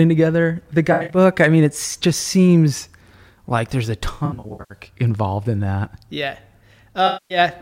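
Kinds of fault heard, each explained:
AAC frame loss with concealment: at 0.92–1.17 s after "together the", 4.14–4.81 s after "seems like there's a", and 7.06–7.38 s, the decoder rebuilds missing frames from the last good spectrum. The speech turns smeared, noisy or phasey, with gaps up to about a tenth of a second in the first two.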